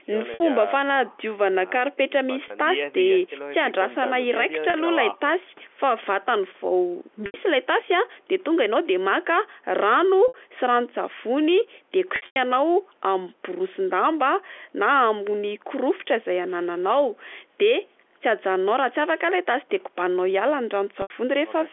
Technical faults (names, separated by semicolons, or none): packet loss with pitch repetition